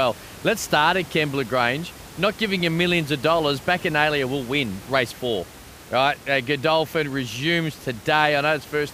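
No technical faults occur in this speech recording, and the only background is the room's own noise, about 20 dB below the speech.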